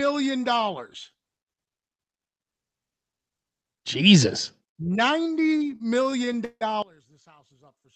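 From 5.31 to 6.63 s the speech falls into repeated stalls, a stutter. Seventeen times in that stretch the receiver ran out of audio and stretched the last bit of sound to cover the gap, adding up to about 373 ms of filler, roughly 28 percent of that span. The longest hold lasts 161 ms and has an audible fade. Nothing actually drops out, but the speech drags and hiccups.

From 6.82 s to the end the level suddenly drops by about 22 dB, and what's left sounds faint. That points to one channel inverted, likely a stereo channel with flipped polarity. When the two sides get folded to mono, everything they share cancels, so only the small difference between them comes through, faint. Throughout, the call codec keeps everything above about 8 kHz cut off.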